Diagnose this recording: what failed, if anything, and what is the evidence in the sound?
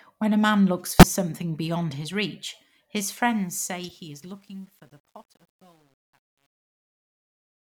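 Codec stage. Corrupt frames were decoded and played. A loud blip at 0.99 to 1.04 s sits between "a man looks" and "something beyond his reach", peaking about -5 dBFS. Quieter bursts follow at 3.83 to 3.91 s, about -30 dBFS, and 5.07 s, about -55 dBFS. Flipped bits misplaced spectral energy.

Sample-format conversion in the fade stage. Truncation distortion on a fade starts at 3.08 s, after "something beyond his reach". The fade-out runs to the clip's end. From 3.96 s it turns gritty. That fits an undithered 9-bit gain stage, where the quiet waveform collapses into coarse steps.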